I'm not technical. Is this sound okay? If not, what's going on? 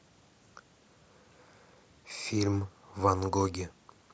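Yes, no faults here.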